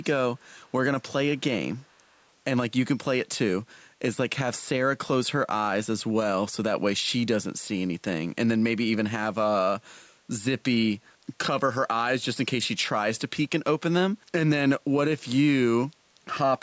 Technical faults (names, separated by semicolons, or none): echo leak